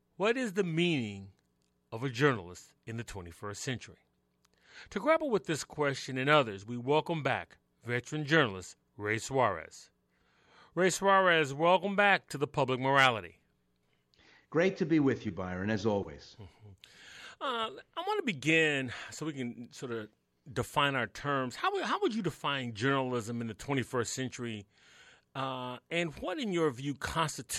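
No technical faults can be heard anywhere in this audio.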